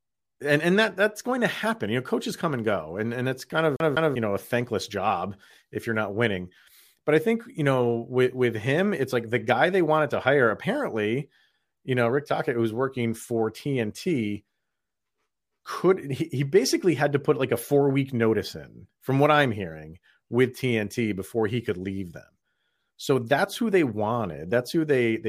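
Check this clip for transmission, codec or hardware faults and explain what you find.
One fault appears in this speech clip. From 3.76 to 4.16 s, after "and and it's kind" and before "know a thankless job", the CD is stuck on one turn. A scratch throws the laser back a track, so a 0.20 s slice plays twice with brief mutes. That makes a quick, even stutter.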